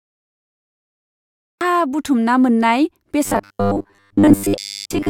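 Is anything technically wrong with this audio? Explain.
Yes, two faults. Cut-off start: the recording began late, so the first 1.61 s is digital silence and the speech then enters abruptly mid-sound with no natural attack. Robotic sound from repeated short buffers: from 3.25 s to 5.09 s, new audio likely arrived too seldom, so short chunks were replayed while most of the real audio was skipped, producing a rigid metallic buzz at 100 Hz, which fits 10 ms repeats.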